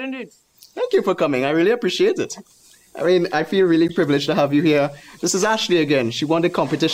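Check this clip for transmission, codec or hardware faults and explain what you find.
One fault is present: a gap at a join of encoded pieces, at 3.88 s. The audio appears to have been encoded in separate pieces of about 4 s each and then joined without trimming, so the start-up delay and last-frame padding from each encoder run stay in the stream. At the join, the continuous sound drops out for about 11 ms, with edges smeared by the codec, then resumes from where it stopped.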